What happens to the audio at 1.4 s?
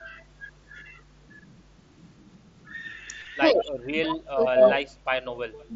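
Nothing goes wrong at 1.4 s: the speech carries on intact through that moment, passing through the mSBC Bluetooth headset codec as it does throughout.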